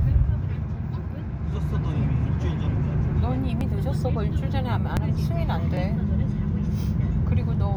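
A recording of everyday sound with three skips at 3.61, 4.97 and 5.77 s, where the audio jumps forward by around 10 ms each time with no gap. That's most likely a dropped buffer (overrun), with samples overwritten before the software read them.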